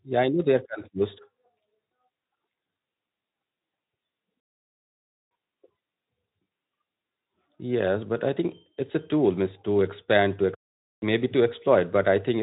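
Speech, with a playback stall from 4.40 to 5.31 s. The sound cuts off mid-flow and the output goes silent for 0.91 s before it resumes. The player likely ran out of data or had its thread blocked. The Speex coding leaves nothing above 3.8 kHz.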